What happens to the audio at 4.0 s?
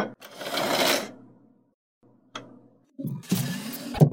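From 3.91 to 3.99 s, damaged data in the compressed stream knocks the decoder out of sync, producing a chirp, squawk, click or short hole that shows as a vertical spectrogram smear and waveform break.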